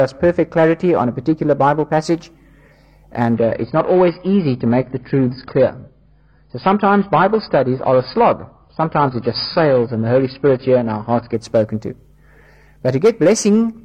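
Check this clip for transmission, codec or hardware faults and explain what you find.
Two faults are audible. From 0 to 2.0 s, de-emphasis applied wrongly: a treble cut with no matching boost tilts the response down smoothly, about 10 dB at 10 kHz, so the sound is muffled. A spectrogram shows upper bands steadily fading.

From 3.34 to 11.34 s, the adaptive stream switches to a lower bitrate without a gap. Nothing remains above 5 kHz, and the audio turns dull and artefact-laden, which fits a drop to a 16 kbit/s AAC rendition. On a spectrogram this appears as a hard ceiling starting and ending abruptly.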